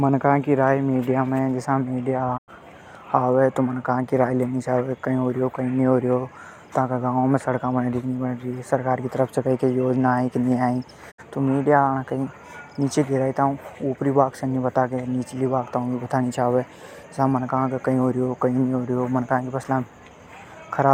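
A speech recording with two digital broadcast dropouts. At 2.36–2.50 s and again at 11.10–11.20 s, just before "तो मीडिया", the sound fades out over about 20 ms, sits in silence and returns. The receiver muted after losing about 96 ms and 64 ms of programme, which points to whole frames failing their checks. Concealment would leave smeared or repeated sound in the gap, but here the audio is simply gone.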